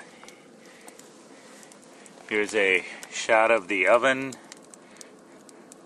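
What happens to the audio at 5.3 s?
Nothing goes wrong at 5.3 s: the audio plays through that moment intact, with no dropout, click or other fault to be heard.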